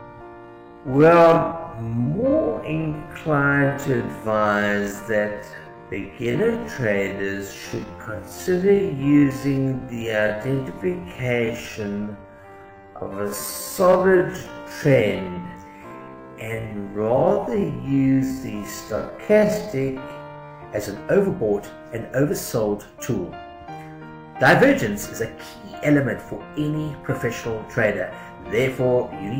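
From the start to 20.58 s, the audio has a time-stretched section, most likely software lengthening that stretch to fill a longer slot while holding pitch steady by repeating short fragments. Played at half speed, 0.5 times the original pace, the sound drags but keeps its original pitch. At 20.58 s the pace jumps abruptly back up while the pitch stays the same.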